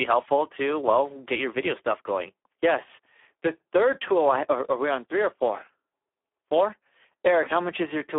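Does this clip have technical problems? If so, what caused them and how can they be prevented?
Yes. Throughout the clip the speech sounds hoarse, grainy and at moments almost robotic, with a thin telephone-like band from roughly 300 Hz to 3.4 kHz and nothing at all above 3.7 kHz. This is Speex codec damage: at the low rate the sound points to, around 8 kbps, this CELP coder has too few bits to describe the excitation signal, so it substitutes a coarse, noisy approximation. Keeping the codec at a higher quality setting, or moving to a modern codec such as Opus, prevents it.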